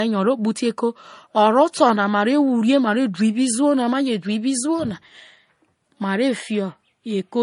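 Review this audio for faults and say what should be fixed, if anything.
For the whole clip, the speech lacks its top end, with nothing above 10.6 kHz, and carries a swirly, smeared coding texture despite the file's high bitrate. This is likely low-bitrate audio saved at a high bitrate. The cut-off and artefacts fit an earlier MP3 encode at roughly 40 kbit/s, later re-encoded as MP3 at about 256 kbit/s. The second encode preserves what survived but cannot restore the detail the first one discarded. To prevent it, re-export from the original uncompressed source rather than transcoding an existing low-bitrate file.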